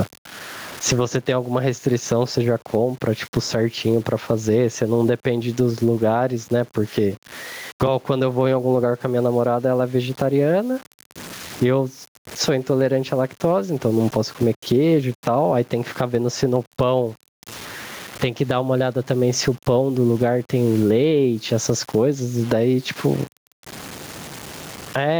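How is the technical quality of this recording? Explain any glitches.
The recording has two faults that run through the whole speech clip.

Low bit depth without dither: the audio was likely truncated to 8 bits without dither, so grainy distortion about 30 dB below the speech follows every syllable and sputters on quiet tails.

Gain pumping: input gain was likely set far too high, with a fast limiter clamping each loud syllable, so the gain swings by about 15 dB, sounding squashed.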